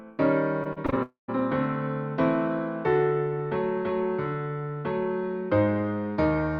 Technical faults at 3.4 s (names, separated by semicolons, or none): none